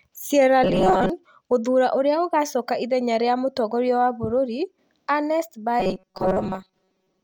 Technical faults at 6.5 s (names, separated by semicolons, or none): robotic sound from repeated short buffers